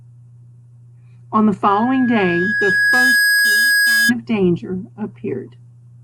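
From 1.67 to 4.13 s a 1.7 kHz tone swells over the speech: loudspeaker feedback squeal, the microphone picking up and re-amplifying its loudspeaker.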